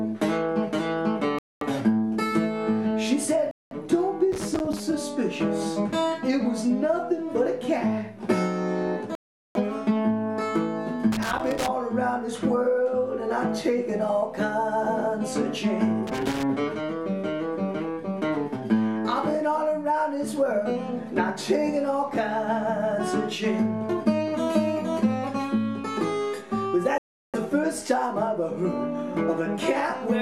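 Dropouts at 1.39, 3.51, 9.15 and 26.98 s, lasting about 0.23, 0.2, 0.4 and 0.36 s, are likely a Bluetooth stall, where delayed packets emptied the headphone buffer. Each looks like a flat gap across waveform and spectrogram before the sound resumes. At 4.32–4.80, 11.12–11.68 and 16.07–16.43 s, loose connector crackle appears as irregular scratchy bursts from a contact rapidly breaking. These show as jagged spikes in the waveform and broadband vertical streaks in the spectrogram.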